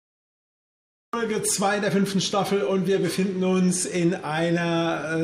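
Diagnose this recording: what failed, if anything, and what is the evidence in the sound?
Cut-off start, digital silence from 0.0 to 1.13 s: the opening second is silent, and at 1.13 s the sound appears already under way, with no attack or fade-in and an abrupt step from silence into the middle of an event. This is a failure at the capture or stream-start stage, where recording began after the sound was already under way. The missing onset was never captured, and the hard edge at 1.13 s is where the first written samples begin.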